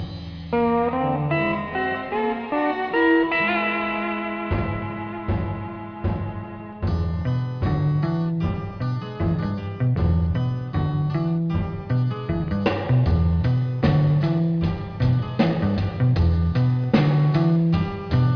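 No technical faults can be heard anywhere in the clip. The audio runs without any interruption or change that would point to a problem in the signal chain.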